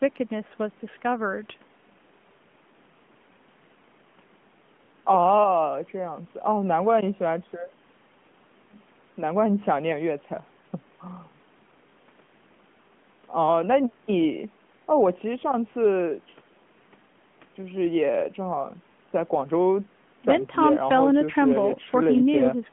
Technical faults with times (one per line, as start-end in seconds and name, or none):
none